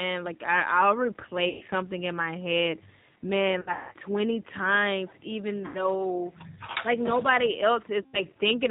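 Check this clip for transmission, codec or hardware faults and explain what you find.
Two problems here: the whole speech clip has been through a G.729 codec, and there are four dropouts where VoIP packet loss was concealed by the speech codec.

The G.729 codec damage runs throughout and is plainly audible. At 8 kbit/s the decoder rebuilds the speech from a vocal tract filter, pitch predictor and a handful of pulses per frame, so it comes out band-limited below 4 kHz and a bit rough and synthetic.

The packet loss concealment shows up at 1.49 to 1.63 s, 3.61 to 3.91 s, 5.66 to 5.83 s and 8.02 to 8.22 s. The decoder patched each gap by stretching its last pitch and filter with falling gain, so you hear a buzzy, fading smear. The first and last gaps cover about 120 ms each, which fits four 30 ms packets going missing. The third gap is about 90 ms. The 3.61 s gap is the worst, with about 240 ms lost across 300 ms and a longest run of 180 ms. 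The sound stays weak for a moment after each gap.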